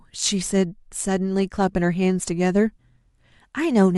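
No technical faults can be heard anywhere in this recording of speech. Nothing in the audio points to a problem with how it was captured or passed along.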